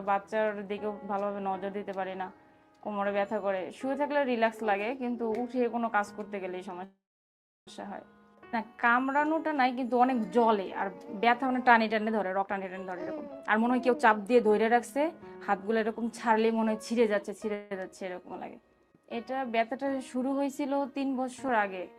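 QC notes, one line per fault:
6.84–7.68 s, call audio freeze: the last sound smears briefly, then about 0.69 s of silence. Audio resumes where it stopped, so nothing is lost, unlike a dropout. Likely late packets draining the jitter buffer.
12.30–15.93 s, jitter buffer speed-up: audio runs at about 123% with pitch unchanged, trimming roughly a second of delay. Unlike a resampling error, the pitch stays put and only the pace hurries.
17.54–17.72 s, call audio freeze: a 0.17 s hold of the last sound with no silence, then the audio resumes intact. This is likely a brief packet delay rather than a dropped segment.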